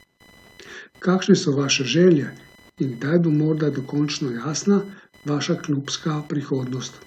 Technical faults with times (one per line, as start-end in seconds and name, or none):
0.00-7.07 computer activity noise